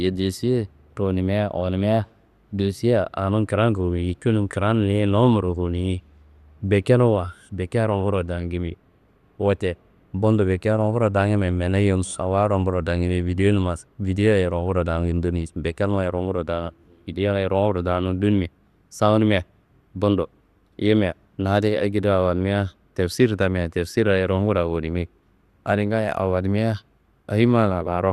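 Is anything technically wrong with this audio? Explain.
Yes. Throughout the speech the sound is dull, with nothing above 12.2 kHz, and carries a plainly audible gurgling, granular roughness. This is likely MP2 compression starved of bits, consistent with about 80 kbps, which shuts off upper sub-bands and coarsely quantises the flickering bands that remain.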